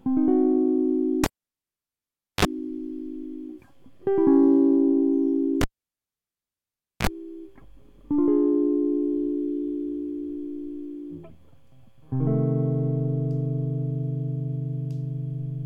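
At 1.24 s the music cuts out with a pop as a live cable is pulled and plugged in again. About 1.16 s of near silence follows, then roughly 40 ms of 50 Hz mains buzz while only the plug tip makes contact, and a second pop at 2.45 s as the signal returns. The same fault recurs from 5.61 to 7.07 s: 1.41 s of dropout, about 40 ms of 60 Hz buzz, and pops at both ends.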